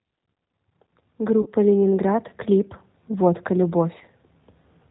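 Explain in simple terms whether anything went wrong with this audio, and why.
The speech passed through a G.729 codec, a phone-call compressor that rebuilds each voice from a simple model of the throat plus a few pulses and discards everything above 4 kHz. The whole clip sounds muffled, slightly rough and artificial, like a cheap phone line.

There was also VoIP packet loss concealed by the speech codec, at 1.42 to 1.48 s and again at 3.98 to 4.03 s. Chunks of audio went missing, about 40 ms the first time, which fits two lost packets, and about 20 ms the second. The decoder filled each gap by stretching the last bit of voice, so you hear a brief buzzy or blurred smear that fades, and the voice stays weak for a moment afterwards.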